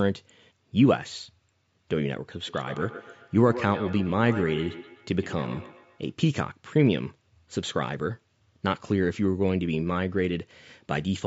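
From 2.4 to 6.13 s the speech carries feedback echo between two devices: a second device in the room replays this microphone's signal, which is picked up again and returns at roughly 150 ms intervals, peaking about 13 dB below the direct speech.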